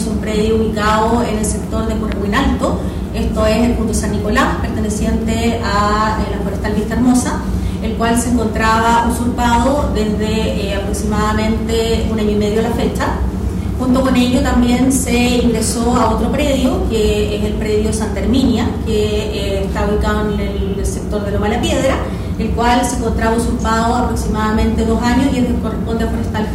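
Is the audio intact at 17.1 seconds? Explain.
No. Hard clipping runs through the whole clip, including 17.1 s. The signal is driven about 10 dB past what the stage can pass, so a small fraction of peaks are sliced flat. This gives a crackle on loud moments, sharper and more abrupt than the smoother thickening of soft saturation.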